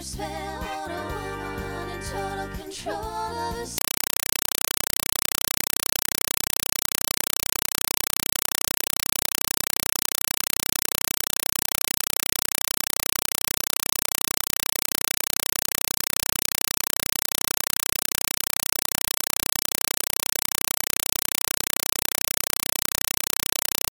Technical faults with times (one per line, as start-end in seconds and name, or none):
3.78-23.90 compressed stream played as audio